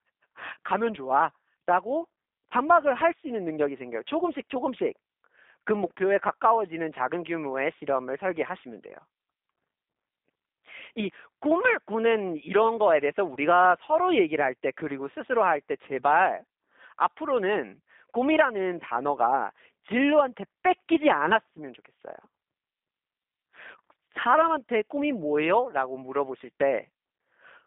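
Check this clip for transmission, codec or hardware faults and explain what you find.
Two faults are audible: low-bitrate codec coding across the whole recording, and one brief dropout near the middle.

G.729 codec, throughout: The speech has been rebuilt by a G.729A-type coder, which fits an 8 kbit/s stream. Instead of carrying the waveform, it sends a vocal tract filter, a pitch predictor and a few sparse pulses for each short frame, and the decoder resynthesises speech from them. The result is a line band of roughly 200 Hz to 3.7 kHz, with a plainly rough, slightly synthetic edge on the voice.

VoIP packet loss concealed by the speech codec, 13.34 to 13.37 s: About 20 ms of signal is missing, which fits a single lost packet. The decoder filled the gap by carrying its last pitch and filter settings forward at falling gain, so the sound there becomes a short stretched, fading tone or coloured noise rather than silence. 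Because each frame depends on the previous one, the speech stays weak or distorted for a moment after the gap.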